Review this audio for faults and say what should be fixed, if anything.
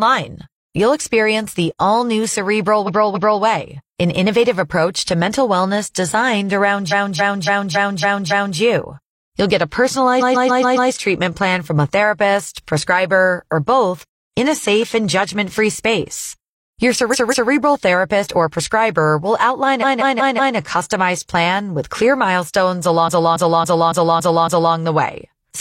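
The speech stutters with repeated frames at 2.84–3.39 s, 6.88–8.56 s, 10.17–10.87 s, 17.09–17.47 s, 19.79–20.53 s and 23.04–24.71 s. In each spot a short block of encoded audio, about 0.14 to 0.28 s long, plays again and again, up to six extra times. All that replaying stretches the clip by roughly 5.7 s. To prevent it, check the encoder or transport for duplicated frame writes or resends.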